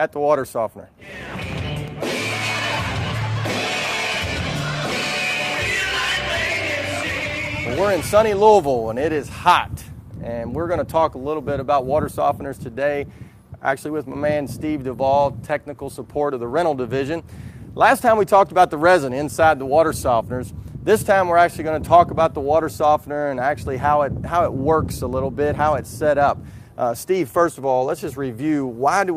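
No technical faults detected.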